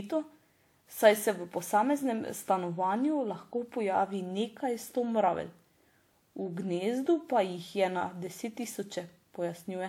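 Throughout, generation loss sounds swirly and hollow with smeared attacks, likely from about four WMA-style re-encodes; the spectrogram shows holes below a 20.1 kHz ceiling.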